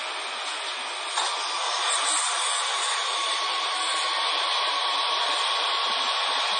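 From the start the sound is watery and swirly, with metallic chirping on bright, hissy parts, smeared attacks and nothing above about 10.2 kHz. This is MP3 compression, likely at a very low bitrate around 32 kbps, which cuts the treble and switches weak frequency lines on and off between frames.

From 3.14 s to 6.39 s a train of clicks ticks over the sound at about 7.1 per second, unevenly spaced, roughly twenty in all and poking a few dB above the audio. These similar pulses likely come from electrical interference or a faulty connection or power supply.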